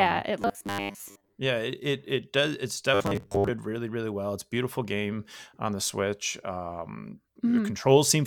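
From 0.42 to 1.38 s, and again from 2.94 to 3.49 s just before "really really well", the speech turns into a rigid, metallic buzz pitched at 100 Hz that still loosely tracks the words. This is robotic sound from repeated short buffers, likely caused by audio arriving too seldom, so a 10 ms stretch is replayed over and over while most of the real speech in those spans is skipped.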